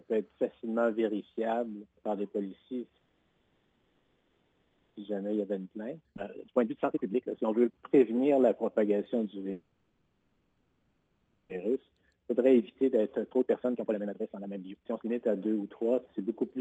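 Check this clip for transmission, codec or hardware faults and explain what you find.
Three kinds of fault appear, twice repeating a stall-and-catch-up cycle, and all are heard over a band that stops around 8 kHz, as expected from a call codec.

Call audio freeze, 2.97 to 4.97 s and 9.52 to 11.52 s: each time the sound stalls for about 2 s and is replaced by a smeared, fading continuation of the last moment rather than true silence. The likely cause is packets held up in transit, draining the jitter buffer so the receiver improvises until they arrive. Playback then resumes where it stopped, so nothing is lost, but the stream now runs about 2 s late.

Jitter buffer speed-up, 5.07 to 8.81 s and 11.75 to 16.35 s: after each stall the audio sounds rushed while keeping its pitch, at 136 percent speed in the first stretch and 143 percent in the second. The delayed packets arrived together and overfilled the buffer, so the receiver trimmed many tiny pitch-period slices to claw back the lag, roughly 1.5 s the first time and about 2 s the second.

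Skip ahead, 6.17 to 6.20 s: inside the first rushed stretch the audio jumps forward abruptly, with only a 10 ms join between the two sides. Roughly 0.7 s of material was discarded while later audio was already queued, most plausibly because the overloaded buffer dropped it to cut delay faster than time-compression alone could.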